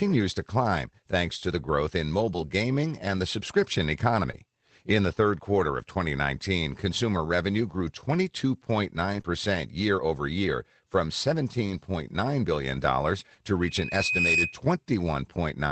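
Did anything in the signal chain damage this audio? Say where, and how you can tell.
Yes. At the network stage, packets were lost and rebuilt from Opus in-band error correction at 2.33–2.43, 3.17, 4.33–4.35, 9.13–9.19, 11.66–11.76 and 14.00–14.02 s. The decoder played a low-bitrate copy carried in the following packet, so there's no gap, but each stretch sounds rougher and noisier.

Short concealed packet loss, also in the network and jitter-buffer stage, appears at 4.31–4.35 s and 9.21–9.26 s. Audio arrived too late, so the decoder extended the preceding sound and crossfaded back. Each is heard as a brief smear or wobble.

A loudspeaker feedback squeal from 13.61 to 14.61 s comes from the acoustic loop at the capture end. The microphone picked up its own loudspeaker, and at 2.5 kHz the loop gain exceeded one. A single tone swells over most of a second to around 5 dB above the sound.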